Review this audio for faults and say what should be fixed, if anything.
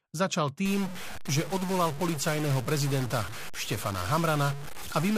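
A stuck bit runs from 0.65 s to the end at 5.18 s. The speech takes on distortion, and the pauses fill with a steady noise floor instead of falling silent. The likely cause is one data bit held permanently at 0 or 1, which pushes roughly half the samples off by that bit's weight. Unlike clipping, the distortion does not depend on loudness, so it is just as present in the quiet gaps as on strong syllables. To prevent it, check the converter and data lines with a bit-pattern test before recording.

A block size mismatch (padded) runs from 1.47 s to 3.30 s. Each block arrives short and its tail is filled with zeros, so a tiny silent gap repeats at 99.6 Hz. That is heard as a buzz near 100 Hz, and the speech runs at 0.996 times normal speed. Random dropouts would be irregular and would lose audio, but these gaps are evenly spaced and only stretch the timing. To prevent it, make sure every stage writes and reads the same block length.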